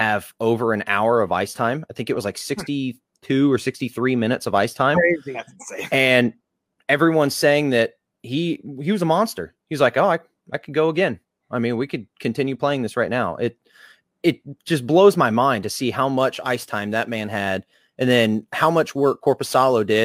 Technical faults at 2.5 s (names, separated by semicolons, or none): none